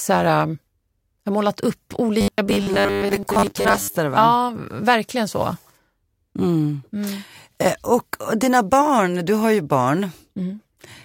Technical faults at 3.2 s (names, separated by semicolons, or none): robotic sound from repeated short buffers